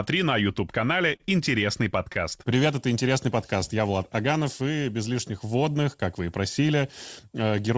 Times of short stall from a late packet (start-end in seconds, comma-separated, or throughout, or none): 1.16-1.33, 2.13-2.17